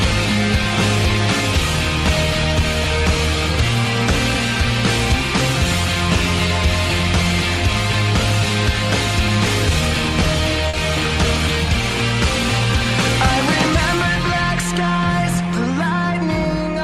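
At 10.69 to 10.75 s the audio briefly smears, a short wobble where the sound seems to stretch or blur for an instant before settling back into place. This is short concealed packet loss: about 40 ms of the stream failed to arrive at the decoder in time, so the receiver synthesised a fill by extending the preceding sound, then cross-faded back into the real signal once packets resumed, leaving that brief smudge.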